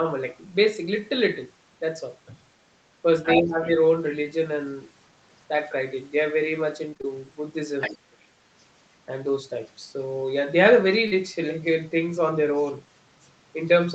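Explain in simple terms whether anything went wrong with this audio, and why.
Several things went wrong in this speech clip, all typical of a phone or internet call.

Other side's voice leaking through: the talker's device was likely playing the other person through a loudspeaker, and the echo canceller failed to strip all of it from the microphone. So a second voice slips in briefly at about 3.24 to 3.36 s and 7.81 to 7.98 s, nearly as loud as the talker, and again at 12.57 to 12.65 s, where it is only a very faint trace.

Speech suppressed in double talk: right after the first leak, both sides were talking at once, and the echo canceller likely could not tell its own talker apart from the echo, so it turned everything down. Between 3.38 and 3.8 s the talker's voice sinks sharply and partly drops out for roughly a third of a second in total, in pieces, instead of staying steady.

Repeated packet loss (robotic sound): from 6.89 to 7.05 s, chunks of the call arrived too late or not at all, four times in quick succession, the longest gap 26 ms. 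Each time, the receiver papered over the hole by stretching the last bit of sound, so about half of that stretch is guesswork. It comes out choppy, with fragments missing.

Short concealed packet loss: one small piece of the call, about 40 ms, failed to arrive around 11.07 to 11.13 s. The receiver filled it by continuing the sound just before, then blended back into the real audio. The result is a quick smear or wobble, short enough that a brief consonant can disappear in it. Throughout the clip, the call's codec also limits the sound to nothing above 8 kHz, which is expected for this kind of call.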